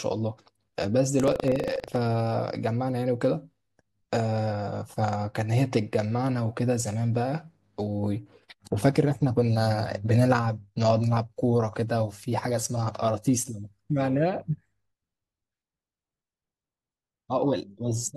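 From 1.16 to 1.96 s the speech takes on a robotic, rattling buzz at 25 Hz, steady for as long as the voice is present. This is buffer tearing. The writing program and the playback hardware have slipped against each other, so every 40 ms period gets a small sliver of audio from roughly a tenth of a second earlier spliced in. The hard joins at either end of each sliver repeat at the buffer rate and produce the buzz.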